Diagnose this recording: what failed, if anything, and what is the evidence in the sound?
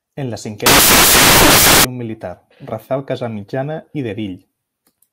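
Sample-format conversion failed: from 0.66 to 1.85 s the speech is replaced by loud, harsh broadband noise, samples built from the wrong bytes. The low bits now dominate each value.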